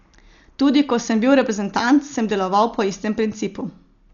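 From start to finish the speech sounds dull, with nothing above 7 kHz, and there's a rough, fluttery noise hanging around the voiced parts. That points to heavy Dolby Digital compression, likely at a starved bitrate, which fits roughly 48 kbps. At that rate the encoder cuts the band short and leaves many frequency lines with no real detail, so the decoder fills them with noise, which gives that grainy shimmer around the tones.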